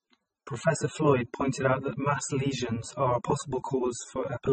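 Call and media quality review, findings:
Transcoding between lossy codecs, whole clip: dull band-limited speech, nothing above 8.4 kHz, two layers of smeary coding grit stacked together. Likely a low-rate AAC pass re-encoded to low-rate MP3, the second codec spending bits re-encoding the first one's artefacts.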